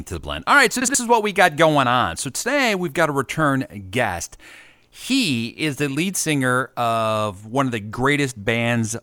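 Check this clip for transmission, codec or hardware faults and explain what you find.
One transmission fault is audible in this speech clip.

Between "right so" and "is what we got", from 0.82 to 0.95 s, frames are out of order. Two adjacent 64 ms blocks, which fits two frames each, were decoded swapped. The result is a garbled flutter, and no time is lost. A spectrogram shows broken formant tracks.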